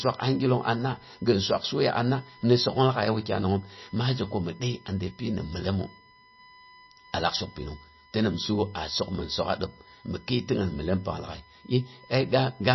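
Speech, and two things run through the whole thing. First, there's a USB whine: a steady tone at 1 kHz, strongest right at that pitch, sitting roughly 30 dB under the speech. That's the bus drawing current in 1 ms frames and the ripple sneaking in through the power or ground, so the pitch stays locked to the frame rate and never drifts. Second, the codec damage is plainly audible and the top end is gone, with nothing above 5.8 kHz. That points to MP3 compression as the likely cause, at a low bitrate around 24 kbps. When the encoder runs short of bits it zeroes out the weaker frequency lines and cuts the treble at a fixed point, so you lose the air and crispness the speech would normally carry up high.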